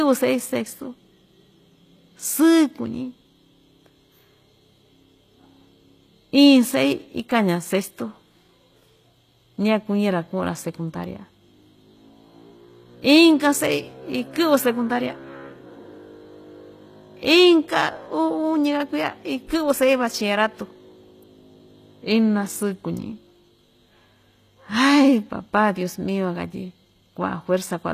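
A speech recording carrying plainly audible HE-AAC compression damage from start to finish, likely from an HE-AAC encode at a low bitrate, consistent with about 24 kbps. The treble is a rebuilt copy of lower bands rather than the original, so s sounds come out gritty and lispy. On a spectrogram, everything stops at a hard ceiling near 14.9 kHz, and the upper region shows repeated, blocky patterns lifted from below instead of continuous harmonics.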